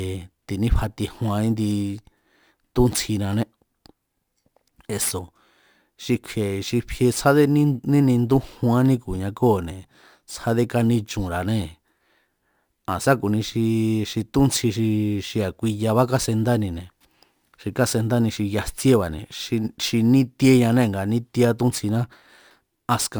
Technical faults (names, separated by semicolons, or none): crude rate conversion